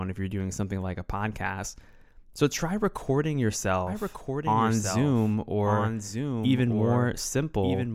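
Speech with a doubled audio track from 3.87 s, just after "try recording", to the end. A second full-band copy of the same sound runs about a second behind, roughly 5 dB quieter, and starts abruptly with no decay or room colour. This is likely a second capture through a slower path. On a spectrogram, each burst's pattern reappears one second later at slightly lower intensity, and the waveform's gaps fill in from that point.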